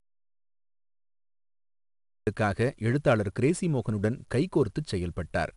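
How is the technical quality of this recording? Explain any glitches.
The recording has two clear faults. One runs through the whole clip. The other silences its opening.

From 0.00 to 2.27 s there is an audio dropout to silence. It is already under way when the clip starts. The gap is silent with no room tone. The input was likely lost, so only silence was written. Any speech in that span is gone.

4-bit ADPCM compression is audible throughout. Each sample is stored as a coarse 4-bit step from a predicted value. The error becomes a gritty hiss riding on louder speech, with roughness on sharp onsets. Nothing is present above 10.6 kHz, and the sound fits a rate near 88 kbps.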